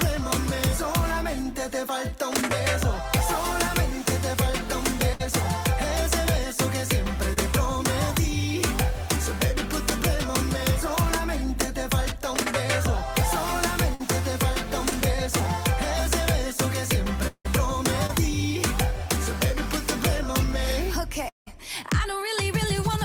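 At 5.13 to 5.21 s and again at 13.94 to 14.01 s the sound turns into a held buzz or hiss that fades for roughly 50 to 60 ms, then picks up further on. Each is a burst of packet loss: the receiver extended the last sound to cover the hole, then skipped ahead past 40 ms and 60 ms of audio that never arrived in time.

Brief smears or wobbles at 7.33 to 7.38 s, 14.89 to 14.93 s and 18.07 to 18.11 s each mark a short concealed packet loss. About 20 ms failed to reach the decoder, and roughly 20 to 30 ms of continued sound was blended back into the real audio.

At 17.27 to 17.47 s and 21.29 to 21.48 s a fading buzz or hiss runs for about 170 ms and ends in silence for 60 ms and 130 ms respectively, before the sound resumes further on. These are likely long network dropouts, with 160 ms and 180 ms of audio lost outright.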